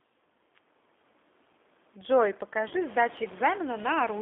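The whole clip carries G.729 codec damage. The band is limited to 250 Hz to 3.6 kHz, and the speech sounds rough and synthetic, fitting an 8 kbit/s codec.

From 2.68 to 2.74 s, VoIP packet loss is concealed by the speech codec. About 30 ms is missing, fitting one lost packet. The decoder extends the last sound into a brief, fading stretch. Room noise rises by about 20 dB around 2.5 s.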